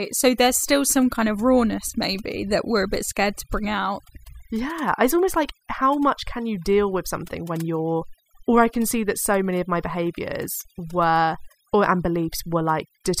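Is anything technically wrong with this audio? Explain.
Yes. Throughout the speech there is overdone noise removal. The noise reduction was set so strong that it pulls individual frequency bands far down or out whenever they sit close to its noise estimate. Quiet parts of the voice are cut along with the noise. The gaps fall to near silence dotted with twinkling specks. On a spectrogram the background looks almost black with scattered isolated dots, and the harmonics look patchy and eaten away at their edges.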